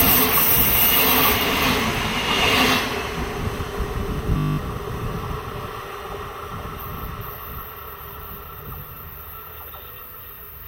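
From 4.38 to 4.58 s a system hang loop sets in. The computer stalled while the audio hardware kept replaying one 20 ms slice of its buffer ten times. The result is a steady 50 Hz buzz, not a random stutter or silent dropout, and about a fifth of a second of sound is lost.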